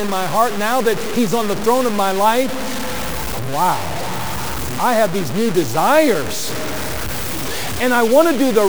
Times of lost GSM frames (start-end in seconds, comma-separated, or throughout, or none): none